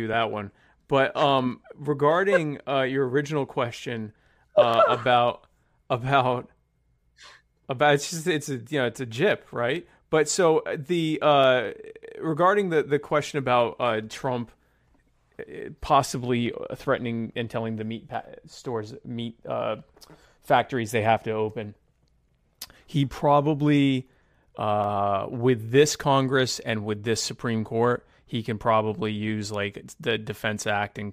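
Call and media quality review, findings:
Regular clicks on speech, every 1.67 s from 1.39 to 29.86 s, about twenty in all. Likely clock drift buffer slips, around 100 ppm, dropping or repeating a few samples. Waveform: small discontinuities; spectrogram: evenly spaced thin broadband vertical lines.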